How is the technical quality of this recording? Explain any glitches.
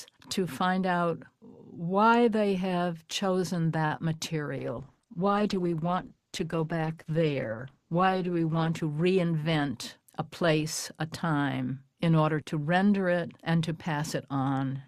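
The recording has a cluster of network-related glitches early on, then a long stretch of degraded codec quality with a brief speed-up in the middle of it.

At 3.85 to 3.93 s there's a short stall from a late packet. A packet showed up behind schedule, the jitter buffer ran dry, and the receiver held the last sound for about 52 ms until the data arrived, then picked up exactly where it left off. Nothing is actually lost, but that moment is drawn out with a faint buzz or dip, and everything after sits 52 ms later.

Right behind it come two short concealed packet losses, at 3.97 to 4.00 s and 4.16 to 4.20 s. Each time about 20 ms of audio never reached the decoder, so the receiver patched the gap by extending the preceding sound and then crossfading back into the real signal. You hear each one as a quick smear or wobble, and anything very brief in those windows can simply go missing.

From 4.60 to 11.09 s there's a call bitrate drop. 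The bandwidth estimate fell and the encoder went from 48 kbps down to 11 kbps, sitting at that floor for about 3.7 s. With so few bits the codec quantises much more coarsely and throws away the upper frequencies, so the audio turns muffled and watery, with rough texture, until the rate climbs back near the end of that span.

Inside that stretch, at 8.89 to 9.32 s, there's a jitter buffer speed-up. The buffer had built up more audio than its target, so the receiver trimmed out short pitch-period chunks repeatedly, around 50 ms in total. Playback runs at about 109% speed with the pitch unchanged, which comes across as a brief hurried, slightly rushed feel.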